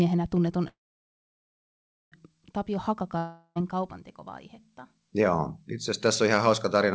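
From 0.68 to 2.14 s, a call audio freeze, likely from delayed packets draining the jitter buffer: a brief fading buzz, then about 1.4 s of silence before speech resumes intact.

At 3.18 to 3.58 s, a long network dropout loses about 0.38 s of audio: the last sound is stretched into a fading hiss, and speech returns with that stretch missing.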